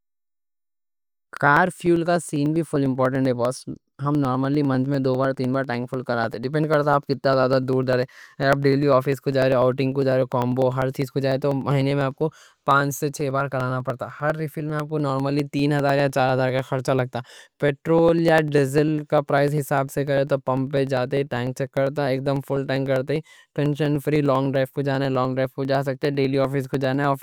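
Speech, marred by periodic USB or driver dropouts: something stalls the USB bus or audio driver every 0.0995 s, roughly ten times a second, and each time a sliver of audio, around half a millisecond, is skipped rather than padded with silence. Running from 0.07 s to 27.14 s, these several hundred tiny jumps in the waveform come through as a steady train of ticks riding on the speech, audible only while it is sounding.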